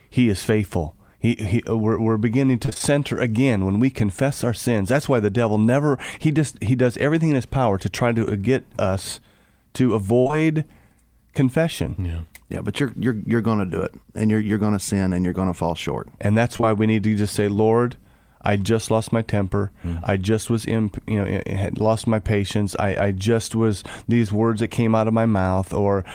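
From 2.65 to 2.82 s the speech turns choppy. This is repeated packet loss producing a robotic sound: four gaps, none longer than 25 ms, each patched by extending the preceding sound. That leaves about half of this stretch synthesised and roughly 80 ms of real audio missing.

At 10.20 to 10.37 s the sound briefly holds and fades before resuming further on. This is a burst of packet loss. About 60 ms never arrived, and the receiver filled that span by continuing and dimming the last sound. Within it, just after "to get us to", two short concealed packet losses at 10.27 to 10.31 s and 10.31 to 10.34 s each drop about 20 ms, so the fill becomes a smeared, wobbling patch.

Between 16.57 and 16.66 s, just before "we need to just", a brief smear appears. It comes from two overlapping short concealed packet losses, the second at 16.61 to 16.65 s. Each lost about 20 ms, bridged by extrapolating the previous sound and blending back, which stretches the passage slightly.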